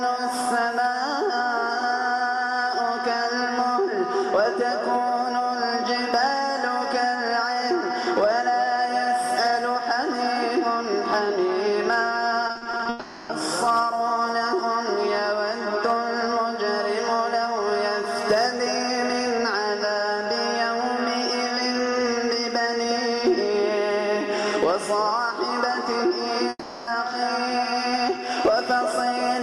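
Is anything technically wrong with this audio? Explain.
Yes. Between 12.47 and 12.87 s there is repeated packet loss (robotic sound): a run of short gaps, none longer than 40 ms, each patched by repeating the preceding sound. Nearly half that span is filler, so it sounds choppy, with fragments missing.

Two long network dropouts follow: 12.89 to 13.31 s, and 26.49 to 26.89 s. Each is one continuous hole, likely from audio not arriving at all, filled by a smeared, fading continuation, ending in a brief silence in the second case. Unlike the choppy stretch, the gap is a single unbroken smear.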